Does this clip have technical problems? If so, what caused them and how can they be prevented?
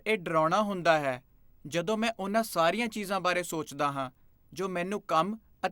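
Yes, video or display buzz: a screen or video cable couples into the audio throughout, adding a faint 50 Hz field-rate buzz and a 15.6 kHz line-rate whine well below the speech. Prevent it by routing audio cables away from displays and video leads, using balanced lines, and grounding all gear to a common point.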